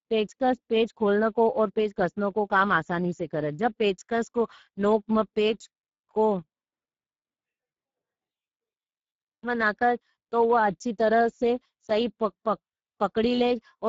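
Speex codec damage runs throughout the speech, plainly audible from start to finish. This CELP coder is working with too few bits for the excitation, so the voice comes across noisy and hoarse, with a roughness that fits a rate near 10 kbps. Nothing is heard above 7.7 kHz.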